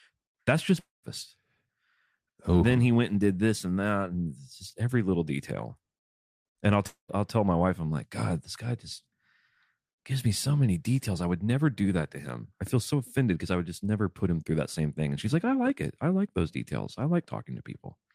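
A speech clip with two gaps where the audio cuts out, at 0.79 to 1.05 s and at 6.87 to 7.10 s, just before "I'll tell my wife", each losing about a quarter second. The sound smears into a decaying buzz, then falls silent for about 0.17 s and 0.12 s respectively. A long network dropout is the likely cause. On a spectrogram, smeared harmonics fade into a blank band before speech resumes abruptly, and the waveform shows a tapering tail and then flat silence.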